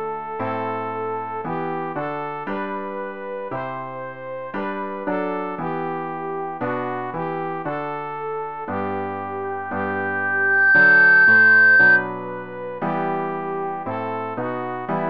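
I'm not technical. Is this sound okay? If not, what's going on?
No. From 9.44 to 12.09 s there is loudspeaker feedback squeal: a microphone picks up its own loudspeaker and re-amplifies it in a loop. A steady 1.6 kHz tone swells over about a second and a half, ending far louder than everything else.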